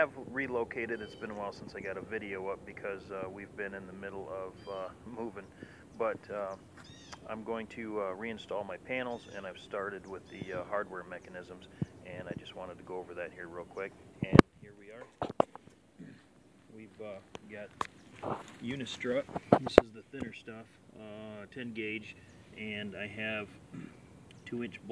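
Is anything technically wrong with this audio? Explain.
No, nothing technically wrong stands out here; the audio just runs along without any problems I can hear.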